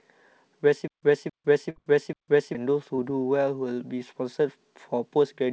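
A recording of speech that, from 0.88 s to 2.55 s, catches on itself: a fragment of about 0.27 s plays, then 0.15 s of dead digital silence, and the same fragment comes back, four times at an even 0.42 s pace before normal audio resumes. That is a stutter with silent gaps, most likely a player or stream stalling, replaying its last buffered piece at each retry and then running dry, so whatever should have played across that stretch is simply gone. Inside that stalled stretch, from 1.70 s to 1.78 s, the sound briefly freezes into a held, fading continuation lasting about 60 ms before jumping ahead with the intervening 60 ms never heard. This is a burst of packet loss: packets arrived too late or not at all, and the receiver kept extending and turning down the last sound until real audio was available again. Later, from 2.96 s to 3.00 s, there is a much smaller smear or wobble, a short concealed packet loss where roughly 20 ms never reached the decoder in time and was patched by continuing the preceding sound and blending back in. 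All of this rides on a call path using G.722 at 64 kbps, which leaves nothing above 8 kHz.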